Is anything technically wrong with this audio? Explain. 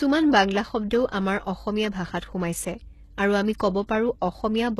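Yes. Throughout the speech, the treble is likely rebuilt by HE-AAC compression at a low bitrate, around 16 kbps. Spectral band replication copies lower bands upward, so s sounds turn gritty and lispy, with nothing above 12.3 kHz.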